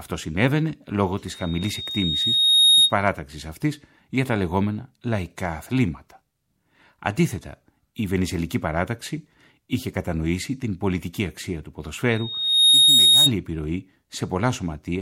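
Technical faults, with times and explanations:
1.27–2.94 s and 12.10–13.32 s, loudspeaker feedback squeal: a microphone picks up its own loudspeaker and the loop gain exceeds one at 3.7 kHz, so that tone swells over roughly a second and a half, then half a second, into a piercing whistle around 10 dB above the sound.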